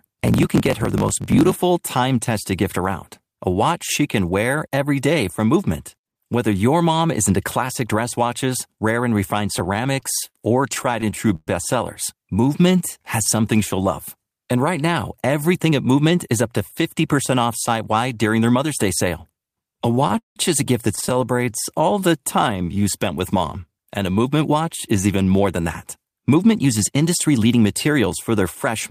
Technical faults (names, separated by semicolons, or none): block size mismatch (truncated); repeated stalls (stutter); jitter buffer slow-down; jitter buffer speed-up